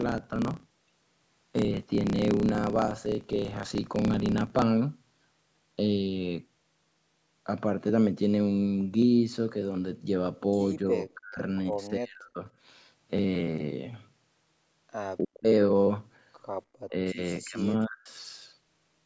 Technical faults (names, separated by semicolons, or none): block size mismatch (truncated); speech suppressed in double talk